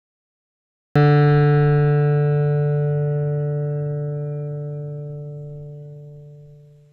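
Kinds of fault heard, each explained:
HE-AAC compression: The treble sounds synthetic and gritty, with metallic top end and nothing above 9.9 kHz, likely from copied-up replicated bands at about 16 kbps rather than a simple low-pass dulling.
Cut-off start: Digital silence runs until 0.96 s, then the music starts abruptly partway through a sound, with no attack or fade-in, unlike a gentle fade or a mid-clip dropout.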